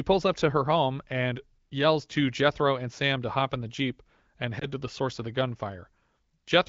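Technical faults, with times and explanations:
4.59 to 4.69 s, lost AMR speech frame: One 20 ms frame drops out. The decoder reuses the last good settings at lower gain. The speech briefly dips.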